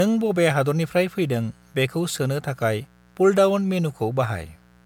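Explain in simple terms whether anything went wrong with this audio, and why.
A steady, raspy buzz runs under the speech from start to finish. This is mains buzz: electrical interference from the 60 Hz power supply leaking into the recording.

The speech also sounds swirly, hollow and smeared, with soft word onsets throughout. This is generation loss, likely from saving the audio as MP3 several times over, with each pass adding damage.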